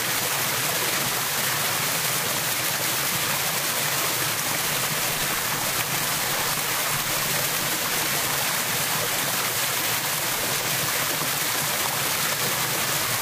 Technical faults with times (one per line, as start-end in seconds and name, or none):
1.40-1.45 damaged data in a compressed stream
6.13-6.18 damaged data in a compressed stream
9.85-9.89 damaged data in a compressed stream
10.64-10.68 damaged data in a compressed stream